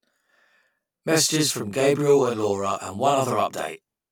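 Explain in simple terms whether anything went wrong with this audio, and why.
Channel delay (doubling) runs through the whole clip. One side arrives 40 ms late and gets mixed back in, so the speech sounds doubled, like a quick slap echo.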